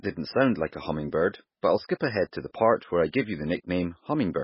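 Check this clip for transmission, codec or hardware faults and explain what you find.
One codec fault runs through the whole clip. MP3 compression, throughout: the speech has nothing above 5.5 kHz and a heavy watery swirl, likely from an encoder starved of bits, which fits roughly 16 kbps.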